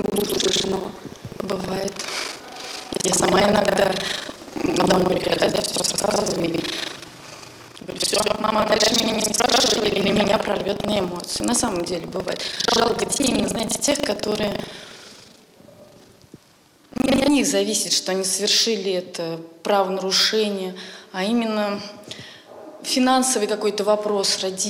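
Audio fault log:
0.00–17.29 s: buffer tearing. A steady 25 Hz robotic rattle, because about half of each 40 ms period replays audio from roughly a tenth of a second earlier.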